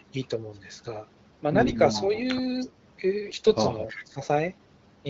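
At 1.60 to 1.77 s, and again from 3.26 to 3.53 s, the speech turns hoarse and scratchy with a gargling edge while keeping roughly its pitch and loudness. These are AMR bit errors: frames arrive with their less protected bits corrupted, at a rate of several percent, yet still pass the check on the core bits. The decoder then places its excitation pulses wrongly and applies slightly wrong pitch, gain and spectral values. The second burst is longer. The surrounding speech sounds light in codec coloration, which fits AMR-WB running around 12.65 kbit/s.

From 3.88 to 4.05 s a faint copy of the voice appears about 0.32 s behind the original and some 15 dB below it. This is an echo leak, likely from a far end playing the call over a loudspeaker whose echo canceller let part of the microphone pickup through and returned it down the line.

Immediately afterward, from 4.05 to 4.20 s, the talker's level drops sharply, by around 20 dB at its deepest, for about 150 ms. 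This is speech suppressed in double talk. The overlap of the talker with the returning echo likely left the canceller unable to tell them apart, so it attenuated everything and briefly pushed the near speech down with the echo.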